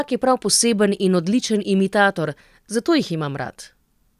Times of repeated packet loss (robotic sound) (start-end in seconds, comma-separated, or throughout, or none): none